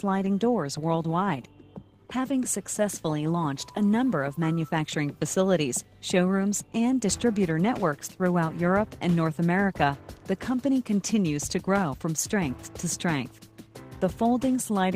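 Nothing is technically wrong with it.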